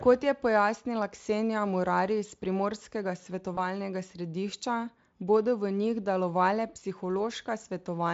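At 3.55 to 3.65 s, VoIP packet loss concealed by the speech codec: a gap fitting one 20 ms frame becomes fading buzz or coloured noise, shown as smeared harmonics and a sagging waveform envelope.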